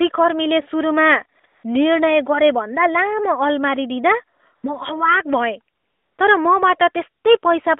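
AMR comfort noise appears at 1.40 to 1.44 s and 1.46 to 1.64 s before "निर्णय गरेभन्दा", 4.38 to 4.40 s, 4.56 to 4.64 s after "अलमारी दिँदा", and 5.76 to 6.18 s. Each time, the phone treated the pause as silent and stopped sending speech frames. The receiver substituted a smooth, synthetic hiss that switches in and out, so the real background is replaced.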